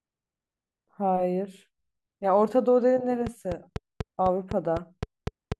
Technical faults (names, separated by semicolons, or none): train of clicks